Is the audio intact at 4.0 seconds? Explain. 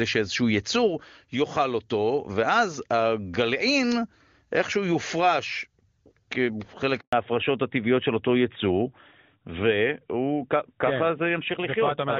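Yes, the speech at 4.0 seconds is intact, carried cleanly by the AMR wideband (HD Voice) codec at its top rate of 23.85 kbit/s.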